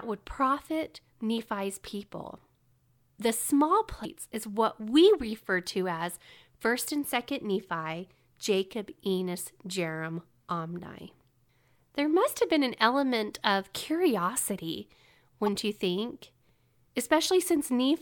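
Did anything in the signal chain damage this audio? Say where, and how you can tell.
Yes, in the codec: damaged data in a compressed stream. Brief disruptions at 4.01–4.06 s and at 15.46–15.48 s, just after "an element of curiosity", show as broadband vertical smears on a spectrogram and abrupt waveform discontinuities, where the decoder misread corrupt frames and lost sync.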